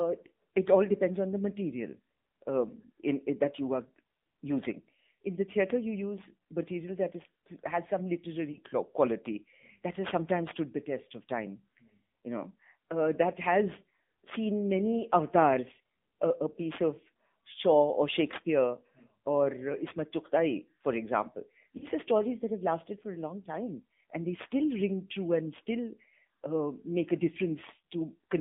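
The whole recording carries AMR narrowband mobile codec sound. Speech is confined to about 200 Hz to 3.6 kHz, buzzy and synthetic, which fits a low rate near 7.4 kbps.

Lost AMR speech frames follow. At 5.15 s, between "that you are using" and "in the theater you", a drawn-out sound fading away suggests about 40 ms was concealed. Another comes at 8.52 to 8.59 s after "has some", and a third at 21.78 to 21.87 s. The decoder reused stale pitch and vocal tract settings, so speech dips and wavers.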